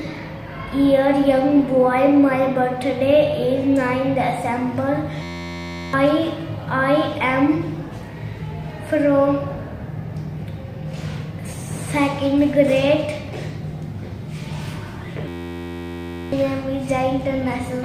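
The audio twice locks into a system hang loop: from 5.22 to 5.93 s, and again from 15.28 to 16.32 s. Each time, an 11.61 ms slice repeats exactly, which fits a 512-sample buffer being replayed while the driver stalls. The result is a steady 86.1 Hz buzz, and roughly 0.7 s and then about a second of real audio never arrive. On a waveform, the frozen slice repeats identically across each event. On a spectrogram, it shows as evenly spaced horizontal harmonics of 86.1 Hz.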